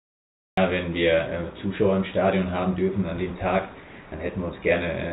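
The first 0.57 s is digital silence. This is a cut-off start: capture began late, and the audio jumps in mid-sound at 0.57 s. There is no natural attack or fade-in. The sudden onset makes the entry sound abrupt and chopped.

From 3.8 s to 4.12 s, for 320 ms, the real background gives way to comfort noise in place of the background. The likely cause is discontinuous transmission: the sender paused, and the receiver filled the gap with synthetic noise. That noise is steady and featureless. It sits about 2 dB lower than the real background, which is itself about 22 dB below the loud parts. The behaviour fits RFC 3389 comfort noise. The detail returns when the sound resumes. The whole clip is band-limited, with nothing above 4 kHz, as expected from a narrowband call codec such as G.711.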